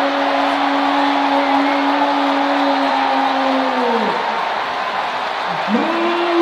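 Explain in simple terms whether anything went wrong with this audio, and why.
Several compressed frames were skipped at 2.9 s, either missing from the file or rejected by the decoder as damaged. The audio jumps ahead by roughly a fifth of a second.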